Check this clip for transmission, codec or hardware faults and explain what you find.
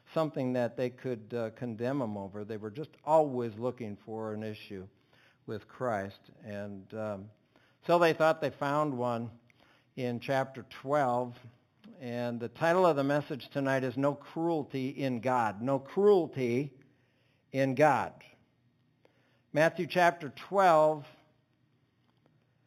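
One fault runs through the whole clip: imaging from linear upsampling. The band stops near 4 kHz, and a fainter mirrored copy fills 4 to 8 kHz, roughly 30 dB below the signal. That points to an 8 kHz source raised to 48 kHz by straight-line interpolation between samples, a weak low-pass filter that both dulls the top of the original band and lets the spectral image through. It comes across as a light metallic shimmer on sibilant and high-frequency content.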